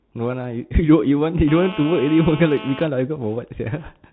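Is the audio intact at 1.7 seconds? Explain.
No. At 1.7 s two problems overlap. The first is GSM phone buzz, which runs from about 1.48 s to 2.84 s: a hard, raspy buzz at 217 Hz with a thick stack of harmonics, sitting about 14 dB below the speech. A 2G phone in a call nearby transmits its radio bursts 217 times a second. The audio circuitry rectifies those pulses into a steady tone that has nothing to do with the speech.

The second is the Bluetooth CVSD headset codec, and that one covers the whole clip, so it's present at 1.7 s as well. Everything above 4 kHz is gone, s sounds come out scratchy, and there's a grainy hiss underneath the speech. The character fits a 64 kbit/s one-bit-per-sample stream whose adaptive step size can't keep up with loud high-frequency content, so that content distorts.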